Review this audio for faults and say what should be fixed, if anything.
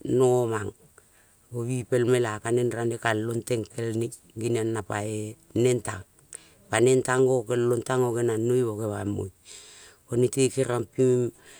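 No faults detected in the speech; nothing needs fixing.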